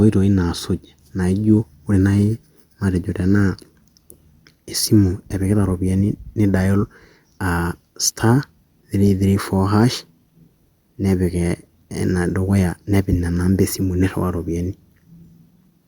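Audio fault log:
Nothing to log here: the speech runs along with no faults to report.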